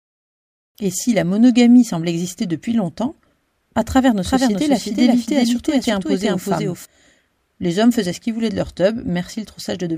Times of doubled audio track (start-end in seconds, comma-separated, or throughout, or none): 4.25-6.85